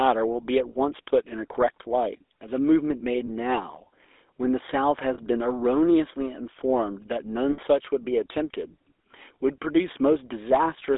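Throughout the recording, the speech carries the sound of the GSM full-rate codec. The line is confined to roughly 300 Hz to 3.6 kHz, and the coding damage is plainly audible as a buzzy, gravelly roughness on the voice, which fits the 13 kbps full-rate scheme. That codec rebuilds speech from a vocal-tract model fed by a sparse, regularly spaced pulse excitation, so fine detail in the voice is replaced by a coarse, grainy texture.

Lost GSM frames interrupt the audio three times, at 3.26 to 3.30 s, 5.14 to 5.19 s and 7.52 to 7.59 s. The gaps last about 20, 40 and 60 ms, which points to one, two and three dropped 20 ms frames. At each dropout the decoder reuses the last good frame's parameters. The result is a brief metallic, rough ring held in place of the missing speech, growing slightly longer at each successive event.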